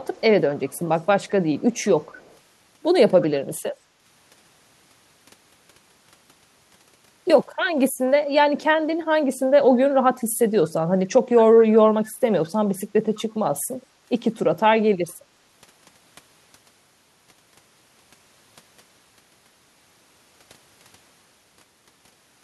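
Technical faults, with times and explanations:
0.06–0.21 s, 0.59–2.37 s, 3.21–3.26 s, 10.19–10.24 s, 10.62–10.69 s, 12.46–12.50 s and 13.15–13.23 s, echo leak: a faint, delayed copy of the speech trails the original by about 209 ms. It sits roughly 25 to 35 dB below the speech, mostly in short scraps and once for nearly two seconds. The likely cause is a far-end loudspeaker whose sound reached its microphone and was not fully cancelled before being sent back.
3.88–4.01 s, background gated by the echo canceller: the room sound briefly dips by as much as about 9 dB, for roughly a tenth of a second, then comes back. While the loudspeaker was playing, the echo canceller pulled the microphone level down hard to suppress echo, taking the background with it. It restored the level once it released, so the dip is short and returns to the previous ambience.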